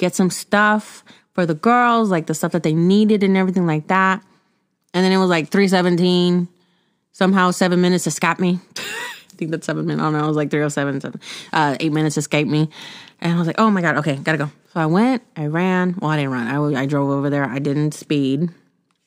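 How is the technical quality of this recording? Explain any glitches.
No technical faults are audible anywhere in the recording.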